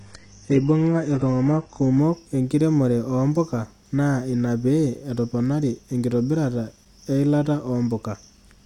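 For the first 2.0 seconds the speech sounds thin and smeared, with the top end either absent or replaced by a hissy, synthetic-sounding sheen and nothing real above about 10.9 kHz. At 2.0 s the quality jumps up with no gap. This is an adaptive stream starting at a low bitrate: playback began on a cheap rendition, which fits a very low-rate HE-AAC version, then switched to a richer AAC-LC version once the connection had been measured.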